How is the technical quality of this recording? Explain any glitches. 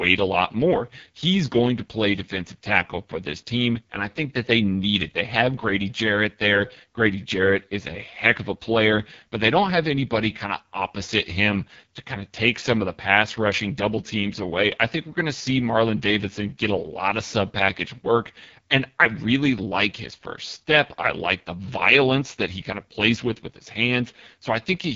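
Poor. An AMR wideband (HD Voice) codec degrades the speech throughout. The codec models speech with pulses through a vocal tract filter. So few bits survive that the speech sounds rough and raspy, which fits the 6.6 kbit/s mode. Nothing is heard above about 7.3 kHz.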